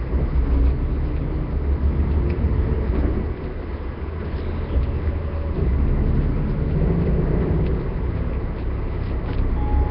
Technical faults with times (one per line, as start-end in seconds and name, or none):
0.00-9.91 Nellymoser compression